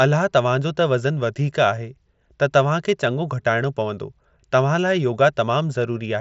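No technical faults are present in the speech, which carries the band limit of a wideband Bluetooth headset link using the mSBC codec, with nothing above about 7.7 kHz and only the light graininess that codec leaves on louder passages.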